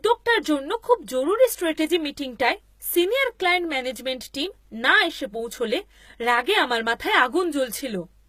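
From the first moment to the last, the speech carries the sound of low-bitrate HE-AAC compression, and that's the likely cause. Only the lower band is really coded; the treble is rebuilt by copying lower bands upward under a rough envelope. The damage is plainly audible: s sounds come out gritty and lispy, with a metallic sheen. It all stops at around 14.9 kHz, and the rate sounds like roughly 20 kbps.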